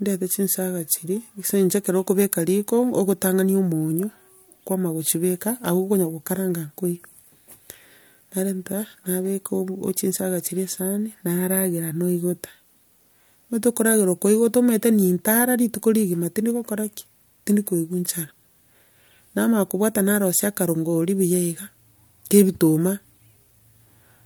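Nothing technical stands out in this speech recording; it's just someone talking, with no problems to point to anywhere along the way.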